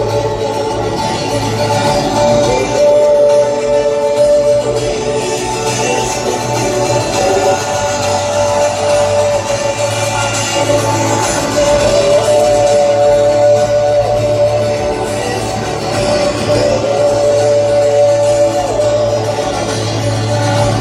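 No technical faults can be heard anywhere in this audio. Nothing in the sound calls for comment.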